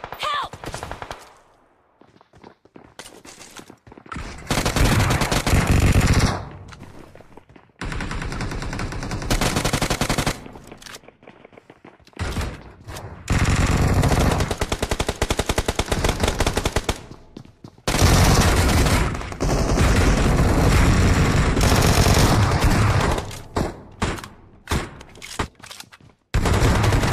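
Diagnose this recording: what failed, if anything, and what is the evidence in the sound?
Nothing failed: listening across the whole recording turns up no audible evidence of a fault at any stage from capture through playback.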